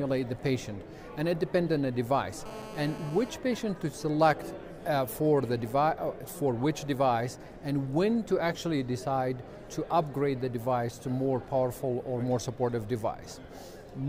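GSM phone buzz runs from 2.46 to 3.30 s. A 2G handset near the recording chain was transmitting continuously in a call, and its radio bursts, repeating about 217 times a second, were rectified by the audio circuitry into a signal of their own. The result is a hard, raspy buzz at 217 Hz, dense with harmonics and about 15 dB below the wanted sound. It bears no relation to the material and holds steady while it lasts.

GSM signalling bursts follow at 3.34 to 4.06 s. A 2G phone, in a call but with its user silent, switched to sending only occasional short groups of bursts instead of a continuous stream. The circuitry demodulated these too, so the steady buzz gives way to even ticks with a longer 217 Hz buzz twice a second. The pattern is quieter than before, sitting somewhere around 25 dB under the signal.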